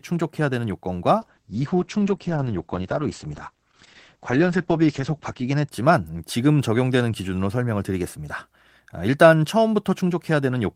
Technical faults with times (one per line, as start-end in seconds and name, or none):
1.23-5.77 call bitrate drop